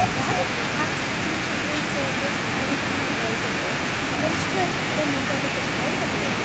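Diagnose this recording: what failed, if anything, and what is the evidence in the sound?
Echo leak at the call-processing stage: between 4.66 and 4.85 s a delayed copy of the speech returns 390 ms behind the original, roughly 10 dB quieter. Likely cause: a far-end loudspeaker whose echo canceller left part of its microphone pickup in the returned signal.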